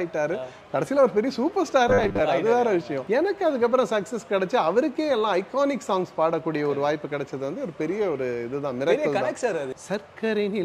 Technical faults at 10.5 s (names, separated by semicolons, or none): none